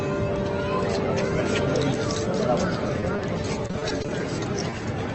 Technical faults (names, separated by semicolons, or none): repeated packet loss (robotic sound); short concealed packet loss